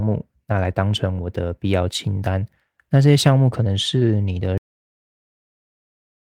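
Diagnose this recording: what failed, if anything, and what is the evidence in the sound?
A cut-off end at the storage or buffer stage: the speech stops abruptly at 4.58 s, mid-sound, and falls straight to digital silence for the last 1.7 s. Unlike a fade or noise gate, there is no decay and no residual noise floor, because the final buffers were never written.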